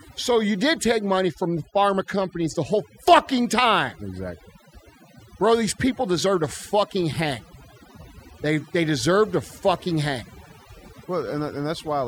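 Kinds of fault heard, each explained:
Overdone noise removal: the speech was run through noise reduction set far too aggressively for a noisy source, so any frequency band sitting close to the estimated noise floor gets pulled down hard or shut off entirely, and the quieter components of the voice are cut along with the noise. Across the whole clip the background collapses to near silence scattered with twinkling, chirpy specks.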